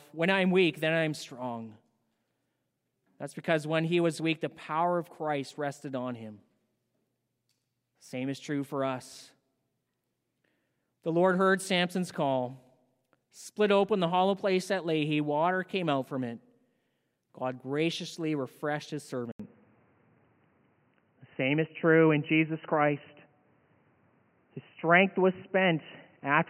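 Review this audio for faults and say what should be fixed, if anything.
At 19.32 s, just after "graciously refreshed his", there is an 80 ms silence. From there to the end, the speech has nothing above 3 kHz and sounds dull and boxy. The level shifts by about 5 dB. A new background noise appears, about 45 dB below the speech. This is likely an input switched to a poorer device, such as a second microphone or a headset's call profile. To prevent it, lock the recording input and disable automatic device switching before recording.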